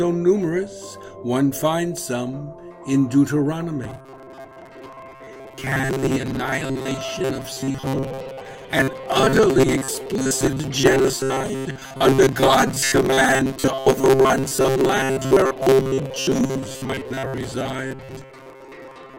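From 3.84 s to the end, the sound turns into robotic sound from repeated short buffers: a rigid metallic buzz fixed at 133 Hz, likely from about 7.5 ms chunks looped while roughly half the real audio is skipped. The buzz rate stays fixed while the sound follows the original only roughly.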